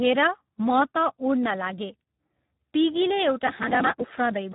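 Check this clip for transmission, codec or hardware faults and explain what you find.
One fault runs through the whole recording: the speech is coded with Speex. From start to finish it sounds hoarse, buzzy and noisy, edging into a robotic, synthetic quality, and it is muffled, with nothing above 3.8 kHz. Speex is a CELP codec that models the voice as a filter driven by an excitation signal. The damage is heavy, which fits a low bitrate of about 8 kbps. At that rate the excitation gets too few bits, so the voice's natural detail turns to noise and buzz, and the upper band is simply not carried.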